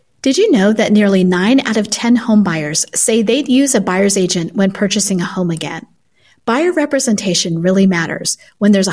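Nothing in this speech recording stands out as a technical problem; there's no fault to point to anywhere along the way.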